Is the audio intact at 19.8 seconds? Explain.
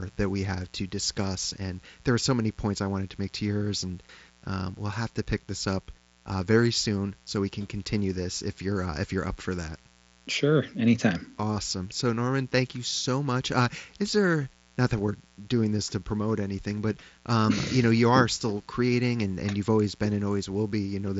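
No. Mains buzz runs through the whole clip, including 19.8 seconds. Switching spikes from 60 Hz mains leak in twice per cycle, spreading harmonics into the kilohertz range. The result is a steady, raspy buzz, roughly 30 dB below the speech, over mSBC-limited audio that stops near 7.7 kHz.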